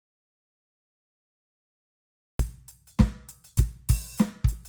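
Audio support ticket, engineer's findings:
Dropout to silence, 0 to 2.39 s. Already under way when the clip starts. Silent, no room tone. Music enters mid-flow at 2.39 s. Likely cause: input lost upstream, recorder kept writing silence.

Opus compression, throughout. Music sounds grainy and rough, tones turned noisy. Bands refilled with folded or noise content, not left empty. Content reaches about 20 kHz. Points to a low bitrate near 24 kbps, likely CELT mode.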